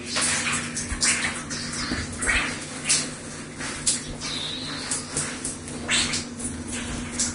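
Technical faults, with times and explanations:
Throughout, Vorbis compression: the sound is hissy and grainy, with roughened tones, blurred attacks and nothing above 10.6 kHz. This is likely heavy Vorbis coding near 33 kbps, where coarse treble quantisation turns detail into noise. A spectrogram shows a hard 10.6 kHz ceiling over speckled, patchy upper bands.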